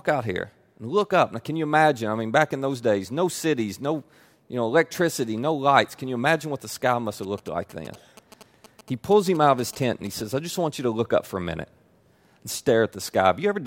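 GSM signalling bursts run from 7.23 to 10.22 s in this speech clip, starting just after "what the sky must" and stopping before "I just want you". A nearby 2G phone sending only short groups of radio bursts, as when signalling rather than carrying a call, is picked up and rectified by the audio circuitry. The result is a galloping dit-dit-dit of brief buzzes at about 217 Hz, roughly 20 dB below the speech.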